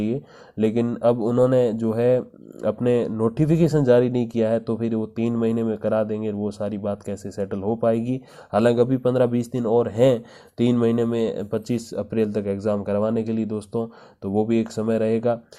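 Nothing goes wrong anywhere in the clip, so there's no technical fault to point out at any moment.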